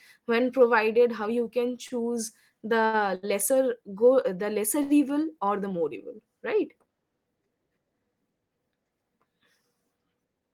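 Five short stalls from late packets come first. The first falls at 1.71 to 1.75 s, just after "when provided how you". Others follow at 1.87 to 1.92 s, 2.86 to 2.95 s and 3.15 to 3.25 s, the last two just before "lesser go", and then 4.83 to 4.92 s. Each time a packet arrived late and the jitter buffer ran dry. The receiver stretched the last sound until the packet came. Nothing is lost, but a sound hangs too long, by up to about 77 ms, with a faint buzz or dip.

Near the end, from 10.10 to 10.41 s, a jitter buffer speed-up sets in. The buffer was holding more than its target. The receiver cut small pitch-period slices, roughly 40 ms in all. The speech runs at 112 percent speed with unchanged pitch. It sounds briefly rushed.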